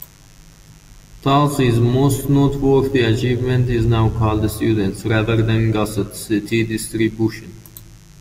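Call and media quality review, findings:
Mains buzz, present across the whole speech clip. Steady raspy buzz on a 50 Hz fundamental, harmonics extending to several kHz, roughly 35 dB below the speech. Probable source: dimmer, rectifier or unshielded cabling injecting switching spikes at 100 Hz.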